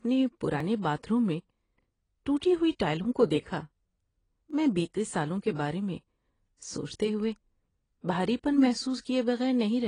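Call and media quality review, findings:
AAC compression throughout: dull, smeared speech with a fizzy, warbling texture on sibilants. Spectrogram shows a lowered ceiling and patchy holes below it. Likely AAC-LC at a low bitrate; the damage fits roughly 24 kbps.

Dropped buffer (overrun) at 0.60 s, just before "باتھ روم میں", and at 4.51 s, just before "میں بتیے سالوں کے": a skip, no gap. Waveform shows a step discontinuity where about 5 ms and about 10 ms of audio are missing. Likely capture not reading before the hardware overwrote it.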